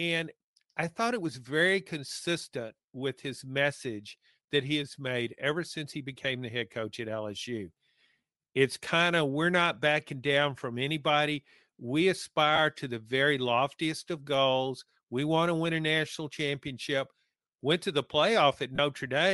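A speech recording with audible codec damage throughout: the upper spectrum has a breathy, grainy texture, as though high-frequency detail has been replaced by shaped noise. This is likely Bluetooth LC3 compression, the LE Audio transform codec. At the rate this clip suggests, around 48 kbps with 7.5 ms frames, the encoder zeroes many upper bands and the decoder fills them with noise. Short lost LE Audio frames also occur. At 6.23 s, between "made ever since he" and "the head coach at", there is a brief noisy smear about 15 ms long. Another occurs at 12.56 to 12.58 s, just before "to the very loftiest". A longer one at 18.76 to 18.79 s lasts about 30 ms. The durations fit two, two and four missing frames. In each case the decoder repeats the previous spectrum with randomised signs, which turns voiced sound into a short burst of noise.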